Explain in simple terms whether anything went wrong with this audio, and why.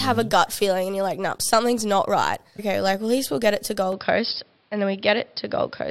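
Two things went wrong. At 2.58 s, a likely stream segment skipped: one chunk of the stream seemingly failed to arrive and playback carried on with the next. The sound jumps forward between "something's not right" and "like at least we'll", so part of the talk is missing.

From 3.92 s, just after "we'll get it to", to the end, the recording most likely had its input switched to a poorer device. The sound turns duller and boxier, with nothing above about 5.3 kHz and a faint new background noise, though the loudness stays the same and there is no gap at the switch.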